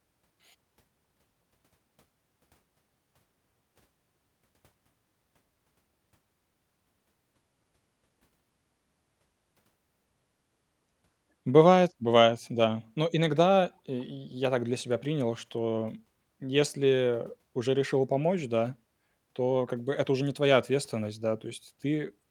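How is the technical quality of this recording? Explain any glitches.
No technical faults or glitches can be heard anywhere in the recording.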